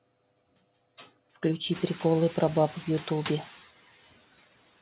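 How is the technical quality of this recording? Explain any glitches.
The recording has one fault, noise suppressor artifacts, which run through the whole clip. The suppressor lowers each band it judges to be steady noise, frame by frame, by about 16 dB. The background therefore sinks between phrases and swells back under the speech.

The room noise rises by about 20 dB around one and a half seconds in and then sits about 18 dB below the speech. Nothing is heard above 4 kHz, which fits a narrowband G.711 mu-law call path.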